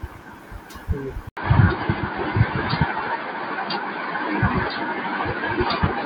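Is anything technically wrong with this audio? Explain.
Yes. At 1.29 s the audio drops out for about 80 ms. From then to the end, nothing above 4.8 kHz remains, and a faint new noise floor appears. The level stays about the same. This is likely an input switched to a poorer device, whose narrower band leaves the sound dull and boxy.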